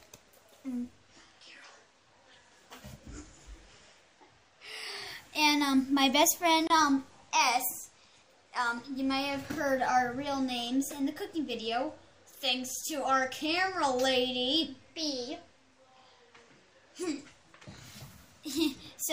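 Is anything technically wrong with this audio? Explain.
Yes. At 6.67 to 6.70 s there is a gap at a join of encoded pieces: a gap of about 28 ms breaks the continuous sound, then it resumes exactly where it left off. It comes from two separately encoded segments being spliced without trimming the encoder's start-up delay and final-frame padding. On a waveform it shows as a short flat stretch with edges softened by the codec. On a spectrogram it is a thin vertical blank strip across all frequencies.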